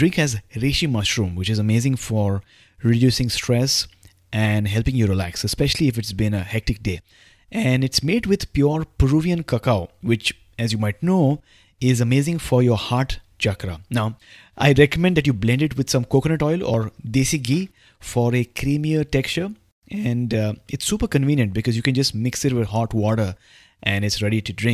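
No technical faults are audible.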